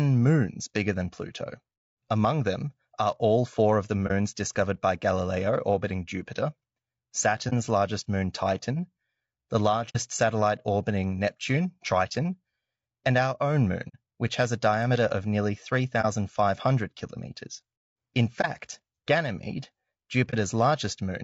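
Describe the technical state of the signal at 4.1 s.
At 4.1 s there is an AAC frame loss with muting, a brief hole from 4.07 to 4.12 s, right after "all four of the" and before "discovered by". The decoder lost what sounds like a single frame of about 30 ms and replaced its spectrum with silence. The overlapping windows taper the sound down and back up, so the gap has soft edges. On a waveform it is a short dip to near zero with ramped sides. A spectrogram shows a narrow vertical blank band across all frequencies.

Underneath, the speech is rough and grainy, with noise filling the spaces between harmonics and a thin, synthetic-sounding top band. That damage is plainly audible and is likely caused by low-delay AAC compression (AAC-ELD), which fits a low bitrate around 32 kbps. Short frames resolve pitch harmonics poorly. On a spectrogram the harmonic stripes look smeared, with speckled noise between them and a coarse, patchy upper region.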